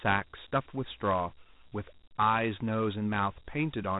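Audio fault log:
throughout, Dialogic VOX ADPCM: the speech carries a gritty, grainy hiss that rides along with it, and nothing remains above about 3.8 kHz. The coarse 4-bit adaptive steps cause the grit, and the dull, narrow band fits 8,000 samples a second at 32 kbps.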